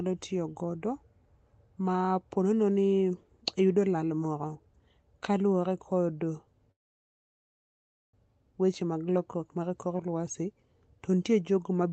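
At 6.71 s the speech breaks off in a call audio freeze lasting until 8.16 s, likely because packets stalled and the jitter buffer ran dry. The last sound is stretched into a short fading buzz, then about 1.4 s of silence. The speech resumes where it stopped, with nothing lost, but now 1.42 s late. A spectrogram, already capped near 8 kHz by the call codec, shows a brief smear then an empty gap, and the waveform goes flat.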